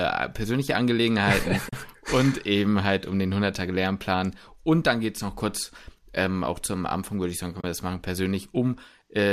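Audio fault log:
1.69 s and 7.61 s (between "würde ich sagen können" and "wir das machen"), AAC frame loss with muting: gaps of about 40 ms and 30 ms, which fit lost 10 ms low-delay frames, where the decoder zeroes the spectrum and overlapping windows fade sound out and back in. Each appears as a soft-tapered dip to silence on the waveform and a clean, full-band vertical blank on the spectrogram.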